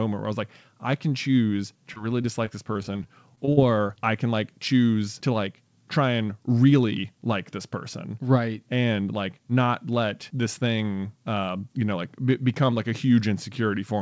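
From 1.94 to 3.91 s, right after "like I can choose", repeated packet loss hits: about a dozen brief dropouts, none over 39 ms, get patched by stretching the last sound, so the speech turns choppy and robotic until "I can like choose". The G.722 call path cuts everything above 8 kHz throughout.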